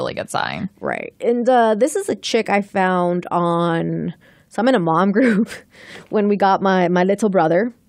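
A speech recording with nothing technically wrong with it.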